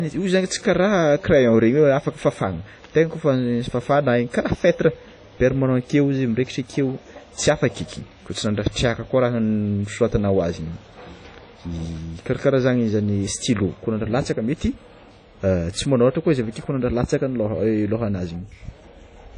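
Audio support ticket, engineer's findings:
Ringing, washy speech with breathing hiss throughout. Nothing above 10.1 kHz. Likely WMA compression, long transform blocks smearing quantisation noise. Damage fits a low bitrate near 32 kbps.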